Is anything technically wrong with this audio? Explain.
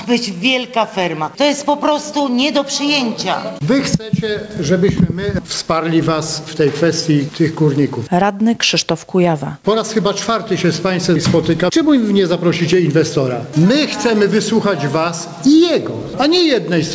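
Yes. Gain pumping runs through the whole clip: the gain swings by roughly 15 dB, and loud and soft parts sit squashed close together. The likely cause is input gain set far too high, with a fast limiter pulling it down on every peak. Nothing is heard above 8 kHz, which fits the G.722 call codec at 64 kbps.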